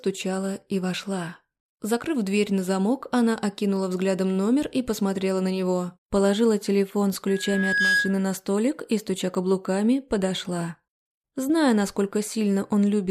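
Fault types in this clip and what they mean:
Loudspeaker feedback squeal: the microphone is picking up the speaker it feeds, and at one frequency, here about 1.7 kHz, the loop has more gain than loss, so that tone keeps feeding itself. You hear a single tone come in at 7.27 s and swell over most of a second until it sits around 5 dB above the rest of the sound. It drops out at 8.24 s, as if the loop was broken.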